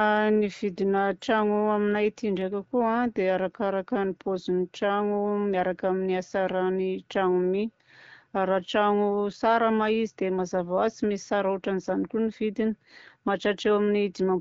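Listening to this speech clip, carried over the AMR wideband (HD Voice) codec at 12.65 kbit/s, nothing stood out as a technical problem.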